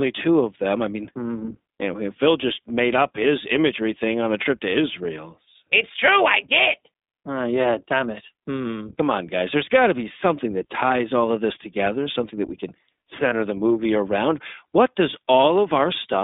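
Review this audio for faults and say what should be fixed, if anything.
The whole clip passes through the iLBC codec. The band runs from about 250 Hz to 3.7 kHz, so nothing above that survives. The coding damage is plainly audible. iLBC codes each 20 ms frame's excitation on its own, without using the previous frame. The texture points to the 15.2 kbps mode. It keeps speech intelligible but not natural. To prevent it, record or send through a wideband codec instead of iLBC.

Lost iLBC frames occur from 13.30 to 13.34 s, between "something that we can" and "the movie around". One 20 ms frame went missing. The decoder filled the gap by repeating the last pitch cycle mixed with noise. It sounds like a held, buzzy or breathy vowel. Because each iLBC frame stands alone, the voice recovers almost at once. To prevent it, carry the call over a network path without packet loss, or add redundancy.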